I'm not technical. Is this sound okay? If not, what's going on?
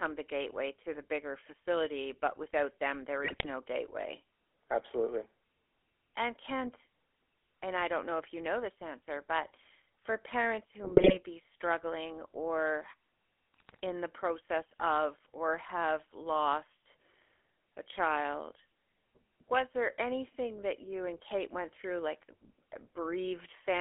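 No. The whole recording has gone through the GSM full-rate codec, the original digital mobile phone coding. It rebuilds the voice from a rough model driven by evenly spaced pulses, which gives the speech a steady buzzy, gravelly roughness. It also sounds thin because the line passes only about 300 Hz to 3.4 kHz. Unlike plain static or hiss, this roughness is part of the voice itself and never lets up.

There are also three short bursts of GSM bit errors, where corrupted data scrambled the decoder for a moment. They come at 3.24 to 3.46 s, right after "but without them there", at 10.84 to 11.17 s, between "answer but for parents" and "be struggling or", and at 13.54 to 13.80 s, just before "in the process of". Each is a brief squawk, pop or gargle. A simple dropout would go silent, but these bursts produce strange, distorted noise instead.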